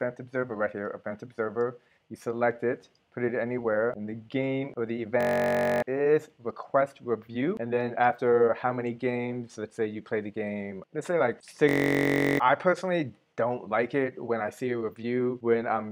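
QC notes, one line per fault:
5.21–5.82 s and 11.69–12.40 s, system hang loop: twice the playback chain freezes while the output keeps replaying one 21.33 ms slice, which fits a 1024-sample buffer. It repeats 29 and then 33 times, so the short loop fuses into a steady buzz at 46.9 Hz, and roughly 0.7 s of sound is lost each time. The waveform shows an identical block tiling the span, and the spectrogram shows horizontal harmonic lines spaced 46.9 Hz apart.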